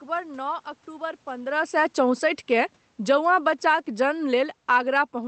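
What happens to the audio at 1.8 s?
At 1.8 s the automatic gain is falling. From 1.52 s to the end of the clip, the gain control has judged the input too loud, or its background noise too strong, and steadily lowers its gain, so the speech and the room noise sink together. On the waveform the whole envelope tapers smoothly, with the background shrinking alongside the voice. A spectrogram shows every band fading evenly. Near 1.5 s the talker also shifts position, which is not a system fault.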